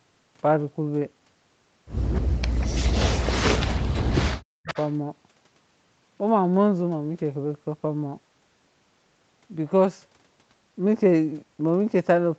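Echo leak at 2.13 to 2.21 s: a faint copy of the speech returns 262 ms late, about 25 dB below it. This is likely loudspeaker sound that the echo canceller failed to remove and sent back.

Speech suppressed in double talk follows from 2.2 to 4.7 s. The speech dips and breaks up for roughly two seconds in total, falling by as much as about 40 dB. The likely cause is the canceller turning down both talkers at once.

A second echo leak at 4.67 to 4.93 s is louder, about 15 dB below the speech, and arrives 278 ms late.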